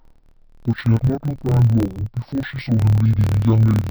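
From start to finish the speech sounds an octave low, doubled and choppy, with a rough flutter at about 38 Hz running under it. This is interleaved audio read as planar. Each 26.12 ms block holds alternating left and right samples. The first half is read as left and the second half as right, so each channel plays at half speed. The block boundaries repeat at 38.3 Hz and produce the flutter.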